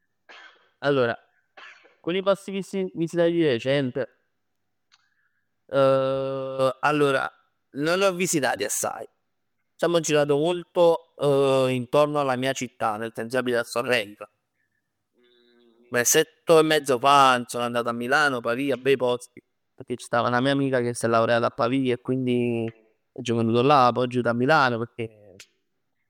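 A speech recording, with no technical faults to report. Nothing in it calls for a time or a cause.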